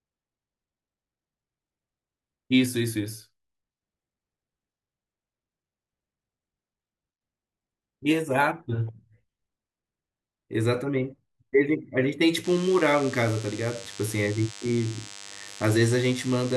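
DECT cordless phone buzz enters this speech recording at 12.44 s and continues to the end at 16.56 s: a thin, steady buzz sitting roughly 20 dB below the speech. Its 100 Hz fundamental and dense stack of harmonics point to a nearby DECT handset or base station, whose radio bursts every 10 ms are picked up and rectified by the audio circuitry, turning that pulsing transmission into an audible tone.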